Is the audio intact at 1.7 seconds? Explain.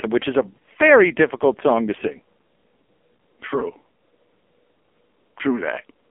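No. At 1.7 seconds the speech sounds thin, boxed-in and buzzy, with a synthetic edge, and that character runs through the whole clip. Nothing reaches above about 3.4 kHz or below about 250 Hz. This is AMR narrowband mobile codec damage, and heavy. AMR-NB rebuilds the voice from a vocal-tract model fed by a few pulses per short subframe, and the coarseness here fits one of its lowest modes, around 5.9 kbps.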